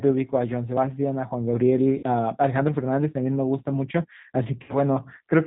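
A speech recording carried through the G.729 codec, with a rough, slightly synthetic quality throughout that fits an 8 kbit/s G.729 stream: a spectrogram shows nothing above 4 kHz, and harmonics look smeared where the model rebuilds each frame from pulses and a filter. VoIP packet loss concealed by the speech codec occurs at 1.98–2.03 s (about 50 ms) and 4.63–4.75 s (about 60 ms). The decoder stretches the last pitch and filter into a fading buzzy tone or coloured noise, visible as a shrinking waveform envelope, and the voice stays weak or distorted briefly afterward.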